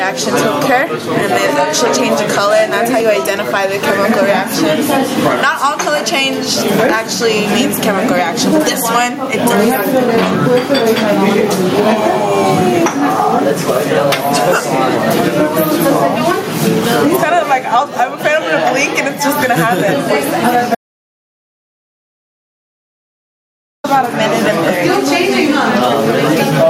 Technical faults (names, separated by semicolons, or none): gain pumping; audio dropout to silence